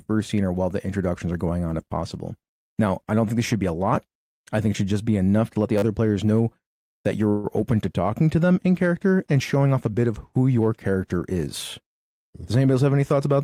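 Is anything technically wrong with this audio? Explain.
Yes. A repeated buffer occurs at 3.95 s, between "this should be a" and "I think it should". A tiny slice plays twice with a hard join, heard as a click. At 5.78 to 5.82 s, just before "players know that", a slice repeats four extra times as a brief buzz. Fresh audio arrived late, so the device replayed its last chunk. This fits a 10 ms buffer.

From 7.29 to 7.46 s, right after "players know that", there is a call audio freeze. The last sound stretches into a fading buzz for 145 ms. Then the audio resumes where it stopped, delayed but complete. Held-up packets emptying the jitter buffer are the likely cause.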